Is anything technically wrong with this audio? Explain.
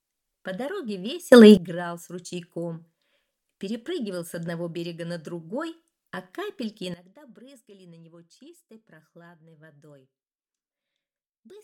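Yes. A sudden gain jump occurs at 1.32 s, where level rises about 21 dB until 1.57 s, and again at 6.94 s, where it drops about 18 dB to the end. The sound and background noise shift together, likely from a digital gain change applied without a ramp.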